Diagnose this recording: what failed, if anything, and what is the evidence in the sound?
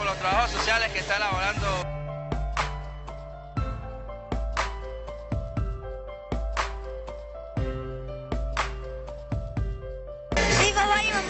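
Nothing failed, and the sound carries no evidence of a fault at any stage of the chain.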